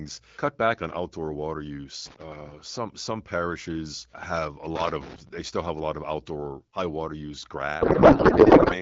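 Loose connector crackle breaks in at 2.06 to 2.23 s after "back on outdoor water" and again at 4.76 to 5.29 s between "some parishes have a" and "they still have a". A worn contact chops the signal into irregular scratching, seen as jagged spikes on the waveform and broadband vertical streaks on a spectrogram.

From 7.81 to 8.76 s, after "water use", a codec payload misread turns the AMR wideband speech into garbled warbling noise. This fits octet-aligned frames being decoded as bandwidth-efficient ones. On a spectrogram the harmonic structure gives way to smeared, unrelated energy.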